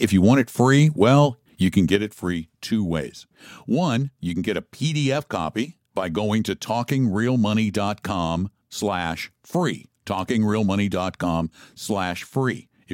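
A speech recording with a sudden gain jump. At 1.96 s the level drops by about 6 dB from one sample to the next and stays there to the end. Speech and background noise fall together. The likely cause is a gain setting applied without a ramp.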